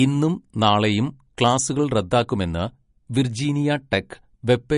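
MP3 compression damage runs throughout this speech clip. Nothing is present above 10.6 kHz, and the codec artefacts are plainly audible. This is likely from a low-bitrate MP3 encode, around 40 kbps, where the encoder removes treble and discards weak frequency detail to fit its bit budget.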